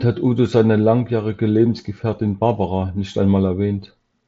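No faults present; the speech is band-limited to about 7.7 kHz, as expected from the mSBC Bluetooth headset link it passed through.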